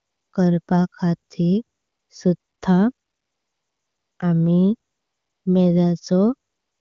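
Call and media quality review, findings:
AMR comfort noise: pauses in the speech become a smooth, steady hiss that switches in and out at 0.00–0.33, 0.61–0.67, 1.77–2.09, 2.37–2.61, 2.93–4.19 (longest, 1.26 s), 4.91–5.45 and 6.49–6.80 s. The sender stops sending speech frames when it judges the talker silent, and the receiver fills the gap with synthesized noise in place of the real background.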